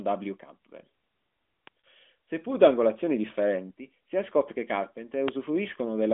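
Lost AMR speech frames at 1.80 to 1.83 s, consistent with two frames failing their checksum: the decoder filled the gap by reusing the last good pitch and vocal tract settings at falling gain, so the speech briefly smears and dips before resuming through the narrowband AMR line.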